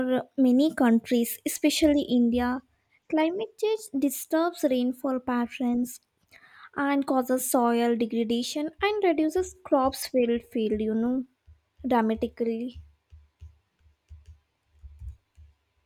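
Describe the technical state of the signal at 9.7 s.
At 9.7 s the speech signal is intact, with no technical fault audible at that moment.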